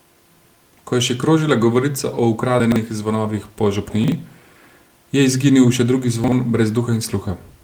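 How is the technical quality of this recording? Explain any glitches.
The recording has audible timing faults: a steady clock mismatch throughout, plus three brief jumbled moments.

Clock drift between sender and receiver runs through the whole clip. The sender's clock is about 3% slow, so the receiver's jitter buffer keeps draining. Playback has to be stretched to keep it fed, and the sound carries a faint, persistent unevenness.

Repeated timing corrections run from 0.14 s to the end. To bridge the slow sender, the receiver repeatedly repeats short fragments, running at 97% speed and adding about a fifth of a second overall. These are heard as slight hiccups and a subtly dragging, unsteady tempo.

Chunks out of order occur at 2.6–2.76 s, 4.04–4.12 s and 6.24–6.32 s. In each, 40 ms pieces of audio arrived late and played after material meant to follow them. At 2.6 s the chunk is three places late, and in the other two it is one place late. 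Nothing is lost, but the hard joins produce a brief garbled, jumbled moment.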